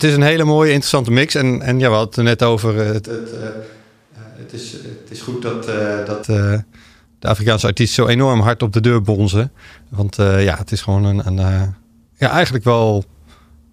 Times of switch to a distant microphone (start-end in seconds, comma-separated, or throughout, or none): 3.08-6.21